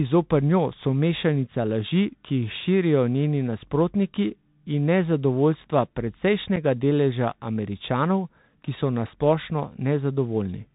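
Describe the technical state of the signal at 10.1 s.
At 10.1 s you're hearing the Bluetooth CVSD headset codec, present across the whole clip. It codes one up-or-down bit per sample with an adaptive step, which fits a 64 kbps link. Nothing above 4 kHz survives, s sounds come out scratchy, and a granular hiss sits underneath.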